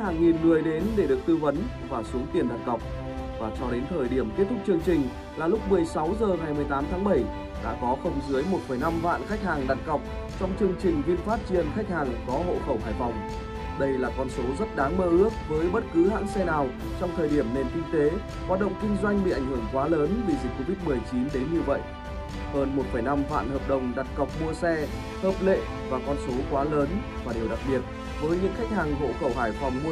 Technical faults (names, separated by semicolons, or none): none